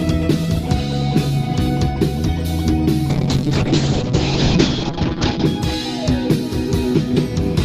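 A call bitrate drop hits from 3.1 s to 5.51 s: the bandwidth estimate collapsed, so the encoder coded far more coarsely, which fits a fall from about 32 kbps to 7 kbps. Audio bandwidth shrinks from 20 kHz to 8 kHz, sounding muffled and rough for 2.35 s.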